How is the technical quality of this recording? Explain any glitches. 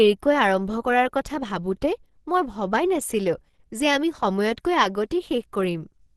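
The recording is audibly degraded by low-bitrate compression for its full length. Throughout, the speech sounds hoarse, muffled and grainy, with nothing above 12.2 kHz. This is likely Opus compression in its hybrid speech mode, which fits a rate near 16 kbps, starving bands of detail and capping bandwidth.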